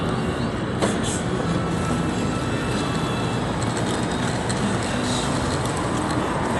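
A recording of sounds that is dull from start to finish, with nothing above 11.5 kHz and a rough, fluttering noise clinging to tonal parts, likely from Dolby Digital compression at a rate near 64 kbps. On a spectrogram the energy stops at a flat ceiling, with grainy, patchy fill below it.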